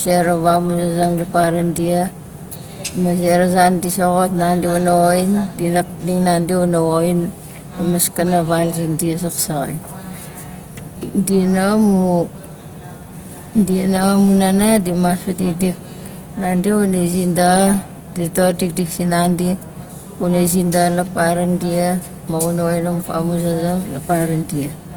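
Throughout the speech, harmonics sound grainy, rough and noisy. This is plainly audible damage from likely Opus compression in its CELT mode, at a rate that fits about 24 kbps. Starved bands are refilled with folded or noise energy, so a spectrogram shows few holes, just smeared texture up to 20.2 kHz.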